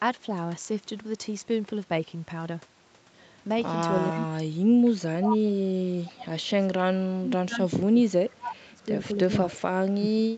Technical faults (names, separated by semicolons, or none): speech suppressed in double talk; echo leak